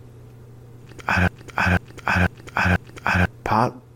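From 1.28 s to 3.26 s the speech falls into a broken-record loop. A fragment of about 0.49 s repeats exactly, back to back, four times. The likely cause is a stalled player or stream resending its last buffer. The speech meant for that span is lost.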